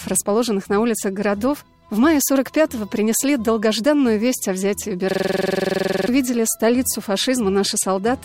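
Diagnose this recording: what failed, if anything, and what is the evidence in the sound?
Driver or buffer stage: a system hang loop. From 5.11 to 6.08 s, one 46.4 ms slice repeats exactly, giving a 21.5 Hz stutter. The host froze while the hardware kept replaying its ring buffer, which fits a 2048-sample buffer. Roughly a second is lost.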